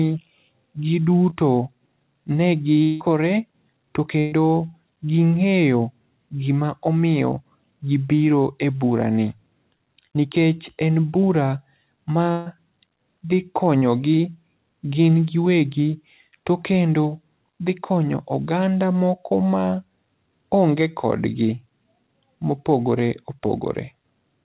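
Right at 1.3 s there's a short concealed packet loss. About 20 ms of the call never reached the decoder in time, and the receiver patched it by extending the sound that came before, so you get a quick smear rather than a hole. The same thing happens at 9.76 s, just after "e burani", and again at 13.78 s, each time with about 40 ms missing. Each is a brief wobble where the real audio was swapped for a continuation of the last bit.

From 2.83 to 3.10 s the sound turns into a held, synthetic-sounding stretch that fades and never drops to silence, and then picks up further along with about 180 ms simply gone. The likely cause is a long network dropout, where nothing arrived for that span and the receiver kept extrapolating the last sound to cover most of the hole.

Then there's a burst of packet loss at 4.19 to 4.34 s, about 120 ms missing, and another at 12.32 to 12.48 s, about 140 ms. In both, a run of packets was lost or arrived too late, so the decoder stretched the last sound out and turned it down as the gap went on. 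You hear a held buzz or fading hiss, then the audio jumps ahead with the middle part gone.

All of this rides on a call path with nothing above 4 kHz, which fits G.711 mu-law at 64 kbps.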